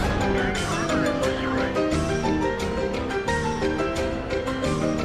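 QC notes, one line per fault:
No faults found in this clip.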